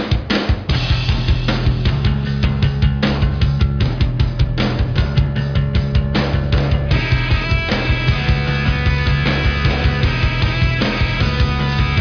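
Nothing is technically wrong with this audio.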